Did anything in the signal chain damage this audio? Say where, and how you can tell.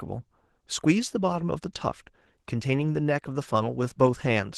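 Yes, at the codec stage, throughout the clip. The speech sounds hoarse and faintly robotic from start to finish. This is plainly audible Opus voice compression. The character points to a low rate of about 16 kbps in hybrid mode: SILK's linear-prediction coder handles the lower band with a coarsely coded excitation, which produces the rasp, while a thinly coded CELT layer covers the top.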